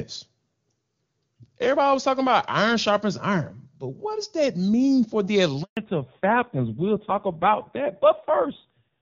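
At 5.63 s the speech cuts out in a handover gap. The call was moved from one network link to another. No speech frames got through during the switch. The sound fades within a few tens of milliseconds and then goes silent. The gap lasts 140 ms, until 5.77 s. Whatever was said in that window is simply gone. It sounds like a brief, clean dropout, not a crackle or a glitch.

From 5.77 s to the end, there is a fallback to narrowband. Before this point the speech is crisp, which fits HD Voice at a high rate such as 23.85 kbit/s. After the switch, nothing above 4 kHz remains. Sibilants lose their edge and the speech turns dull and muffled. It also becomes rough and grainy. That roughness points to an old narrowband codec running at a low rate, around 5.9 kbit/s.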